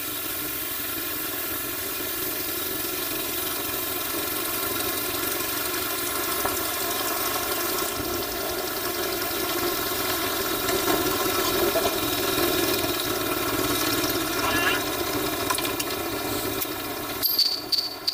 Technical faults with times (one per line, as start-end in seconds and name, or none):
0.00-18.14 planar audio read as interleaved